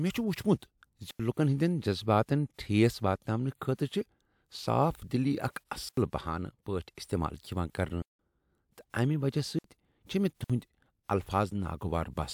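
Speech clip with five blocks of digital silence: the audio drops hard to silence and back at 1.11 s and 5.89 s (85 ms each), 8.02 s (171 ms), 9.59 s and 10.44 s (about 55 ms). The 85 and 171 ms holes fit whole 4096-sample buffers not being filled in time.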